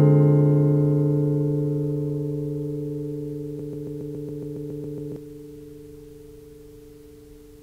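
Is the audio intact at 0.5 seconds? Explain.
Yes, the audio is intact at 0.5 seconds, with no fault present at that moment.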